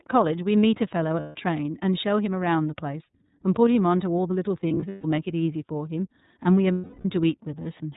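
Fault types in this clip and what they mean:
iLBC codec: A narrowband VoIP codec coding each frame on its own. Nothing above 4 kHz survives, though the speech stays clear. The coding roughness is plainly audible, with a slightly synthetic edge. The 30 ms framing fits its 13.33 kbps mode.
lost iLBC frames: Missing packets are filled by repeating the last pitch cycle with added noise. Each gap sounds like a held, buzzy vowel. This happens at 1.20 to 1.36 s, 4.67 to 5.05 s in scattered bursts, and 6.73 to 7.05 s. Speech recovers immediately afterward.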